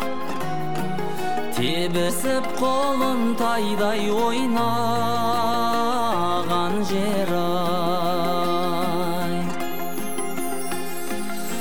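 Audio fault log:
throughout, DC offset: Somewhere in the chain a constant voltage or numeric bias was added to the signal, so the entire waveform rides above or below zero instead of centring on it. Nothing audible comes from the shift itself, but it wastes headroom, brings clipping closer on one polarity, and shows as a steady component at 0 Hz on a spectrum. It can also produce a thump wherever playback starts or stops.
2.08 s and 10.38 s, compressed frames skipped: The decoder failed to play whole blocks of the encoded stream, either because they were missing or because it discarded them as damaged. At 2.08 s roughly four frames vanish, about a tenth of a second of audio. At 10.38 s roughly two frames go, about a twentieth of a second. The sound lurches forward each time.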